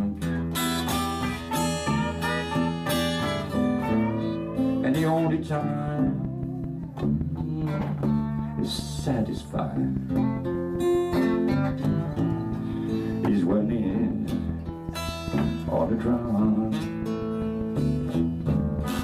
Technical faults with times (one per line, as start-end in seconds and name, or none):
5.88-19.00 train of clicks